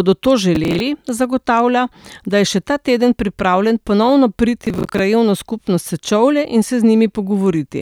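Speech marred by processor overload crackle from 0.55 to 0.80 s, just before "zagotavlja da je še", and from 4.66 to 4.99 s after "ta teden pripravljen ponovno": missed roughly 10 ms buffers replay stale audio, producing gritty tearing.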